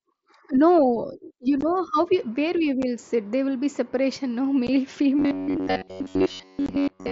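At 1.61 s, just before "how we where we", at 2.82 s right after it, and at 4.67 s after "will be separation no", unconcealed Bluetooth headset packet loss leaves holes of 15, 7.5 and 15 ms. Lost headset frames were never patched, so sound stops dead with abrupt edges rather than smearing.

From 5.19 s to 7.11 s the audio turns into a rigid metallic buzz at about 94 Hz. Most of the stretch is repeated material, likely robotic sound from repeated short buffers. A loop of roughly 10.7 ms imposes that fixed pitch. Unlike the holes, it is continuous and tonal.

Inside that stretch, from 6.66 to 6.69 s, another packet loss cuts out 22.5 ms, heard as a brief abrupt gap in the buzz. All of this sits on top of a wideband mSBC headset link.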